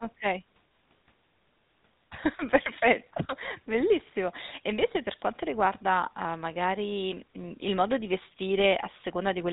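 GSM full-rate codec damage runs throughout this speech clip. The vocal tract is modelled and driven by a sparse, regularly spaced pulse excitation, at what sounds like a 13 kbps rate, leaving a plainly audible buzzy, gravelly roughness, and nothing survives above 3.8 kHz.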